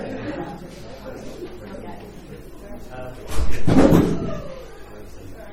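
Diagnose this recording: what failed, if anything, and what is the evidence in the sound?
Nothing failed here as far as I can hear; the audio runs along steadily, with no stage in the chain giving itself away.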